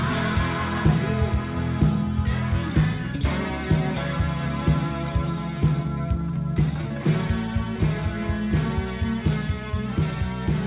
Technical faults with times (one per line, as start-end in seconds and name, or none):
none